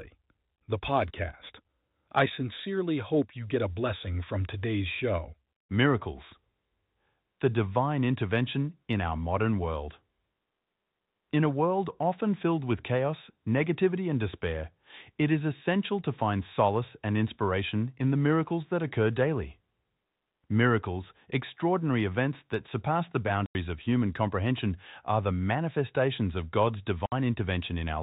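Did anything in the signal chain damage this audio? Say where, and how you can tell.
Yes, at the network stage: packet loss filled with silence. The speech drops to dead silence from 23.46 to 23.55 s (90 ms) and from 27.06 to 27.12 s (60 ms), with hard edges. Both gaps fit whole 30 ms packets that the receiver replaced with zeros, over a band-limited G.711 telephone path.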